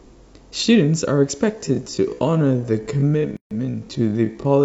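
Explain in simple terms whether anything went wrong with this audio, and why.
From 1.51 s to the end, software likely stretched the speech to fill a longer slot, repeating tiny slices to keep the pitch unchanged. This is a time-stretched section running at about 0.54 times normal speed, so the pace suddenly drags.

Separately, the audio was encoded in pieces that were then joined without trimming the padding each encoder adds. This gap at a join of encoded pieces opens a 142 ms gap from 3.37 to 3.51 s, interrupting the speech before it carries on where it stopped.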